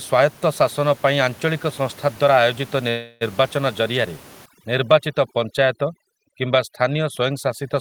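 At 2.89 s the packets carrying the call were likely held up in transit long enough to drain the jitter buffer, a call audio freeze. The receiver fills the 0.32 s until 3.23 s by stretching the last sound into a fading buzz or hiss, then resumes where it stopped, so nothing is lost but everything after arrives 0.32 s later.

From 4.46 s to the end, overdone noise removal sets in. The suppressor cuts frequency bands that sit near its noise estimate, so the room noise, about 23 dB below the speech before this point, drops and breaks up into twinkling specks.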